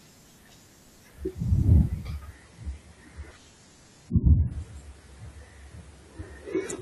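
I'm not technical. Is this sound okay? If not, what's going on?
No. From 2.32 s to the end, the speech suddenly loses its crispness: the top end is cut, with nothing above 11.5 kHz, and it sounds dull and processed. This is an adaptive stream at a lower bitrate, where playback switched to a smaller, lower-quality version, usually because the connection slowed.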